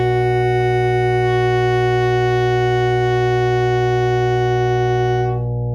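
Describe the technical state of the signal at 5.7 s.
At 5.7 s the music carries mains hum, a steady 60 Hz tone with low harmonics that runs through the whole clip. A ground loop or nearby transformer is coupling the power line into the signal, leaving the hum only a few decibels below the music.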